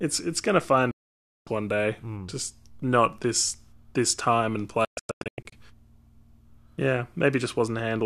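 Two digital broadcast dropouts in this speech. From 0.91 to 1.47 s the receiver mutes for about 0.55 s with a near-instant 3 ms fade. From 4.85 to 5.53 s the audio breaks into short holes, the longest 120 ms, as bad frames alternate with good ones.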